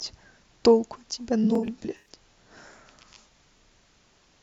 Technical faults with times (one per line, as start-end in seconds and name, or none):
1.43-2.08 AAC frame loss with concealment
1.55-1.58 overlapping chunks
3.58-3.60 overlapping chunks